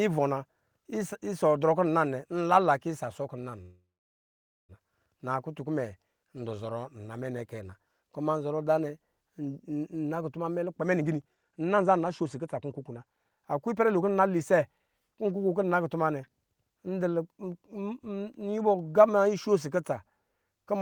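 From 3.61 to 4.72 s the speech stalls into a fading buzz, then about 0.87 s of silence, and resumes where it stopped: a call audio freeze, likely from delayed packets draining the jitter buffer.

From 10.64 to 15.36 s the speech sounds hurried at unchanged pitch, running at 123% speed. This is a jitter buffer speed-up, trimming roughly a second of pitch-period slices to cut excess delay.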